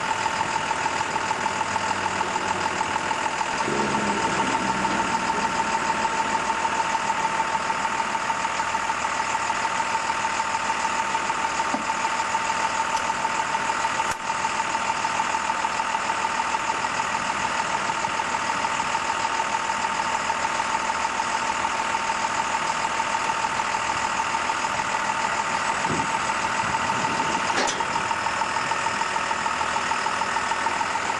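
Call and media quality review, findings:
No call or media quality faults found in this review.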